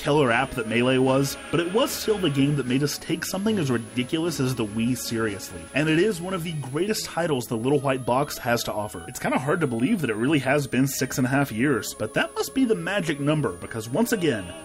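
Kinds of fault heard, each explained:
Switching supply whistle: a high whistle centred around 10 kHz, wandering between 9.0 and 11.4 kHz, runs throughout, roughly 25 dB below the sound. A switching power supply is running in an audible burst mode or beating against another supply.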